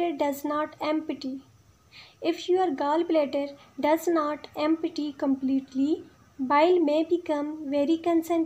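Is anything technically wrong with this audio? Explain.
No, nothing technically wrong can be heard in this audio, and the signal holds steady with no audible disturbance at any point.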